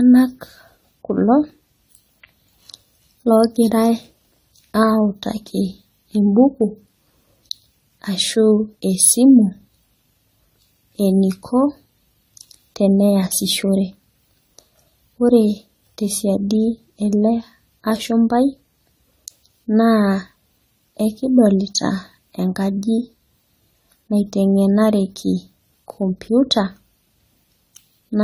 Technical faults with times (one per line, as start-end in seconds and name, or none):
0.00-28.24 generation loss